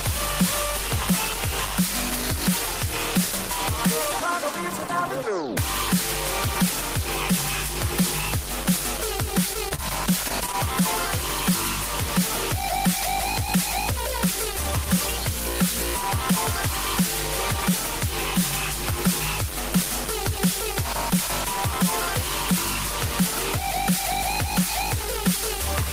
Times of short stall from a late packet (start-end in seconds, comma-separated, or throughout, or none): 9.69-9.73, 10.52-10.55